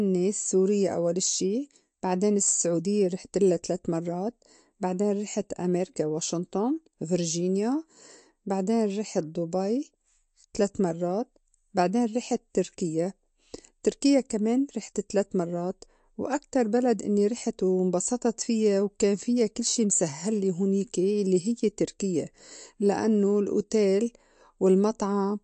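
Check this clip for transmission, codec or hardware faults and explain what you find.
One fault runs through the whole clip. From start to end the speech sounds watery and swirly, with nothing above 8.3 kHz and metallic chirps on s sounds. This is likely MP3 compression at a low bitrate, around 47 kbps: short of bits, the encoder cuts the treble and lets weak frequency lines flicker on and off between frames.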